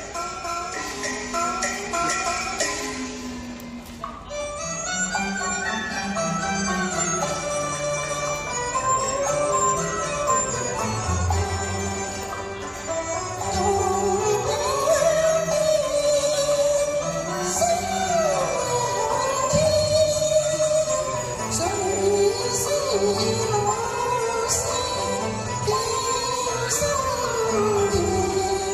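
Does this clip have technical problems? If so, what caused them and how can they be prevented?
No technical problems are audible.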